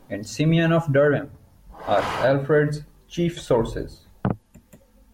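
No technical faults are audible.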